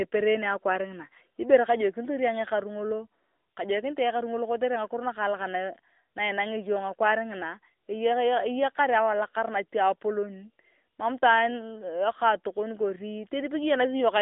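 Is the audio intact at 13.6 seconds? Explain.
No. At 13.6 s, as throughout, the speech carries AMR narrowband mobile codec damage: a telephone band of roughly 250 Hz to 3.6 kHz with nothing above 3.7 kHz, and a plainly buzzy, synthetic quality from pulse-driven vocal-tract modelling that fits a rate near 10.2 kbps.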